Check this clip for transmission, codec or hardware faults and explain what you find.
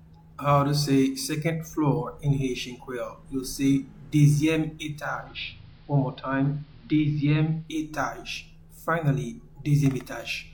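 One fault is present: digital radio blending to analogue, from 4.81 s to 7.91 s. The receiver lost its digital stream and cross-faded to the AM broadcast of the same station, then faded back. Each blend takes about half a second. The level drops by about 1 dB. Hiss rises, though it stays well below the programme.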